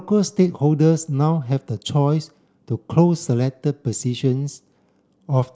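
Nothing in this bit of speech stands out as a technical fault; you can just listen through it without anything catching your ear.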